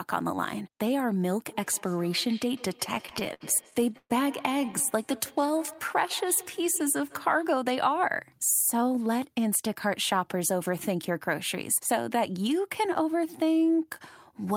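From 1.51 to 7.61 s, a feedback echo between two devices runs under the speech. Another device in the room replays the call into the microphone, and the local echo canceller ignores it. Each syllable returns roughly every 150 ms, thinner and ringing, at about 19 dB below the voice.

Repeated stalls (stutter) hit from 2.95 to 4.12 s, with 15 gaps, the longest 122 ms. Packets arrived late, the jitter buffer emptied, and the last sound was stretched. A second burst at 4.62 to 4.82 s adds four brief gaps. Nothing is lost, but the speech drags.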